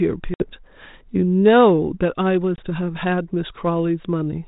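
A speech clip carried over what sounds like a 32 kbit/s G.726 ADPCM link, and it has two bursts of packet loss on an ADPCM call. At 0.34 to 0.49 s there's a hard-edged hole of about 60 ms, roughly three packets' worth, and at 2.56 to 2.65 s a shorter 20 ms gap, about a single packet. Each time the speech comes back slightly distorted, because the decoder's adaptive predictor and step size have drifted from the sender's and need a few tens of milliseconds to catch up.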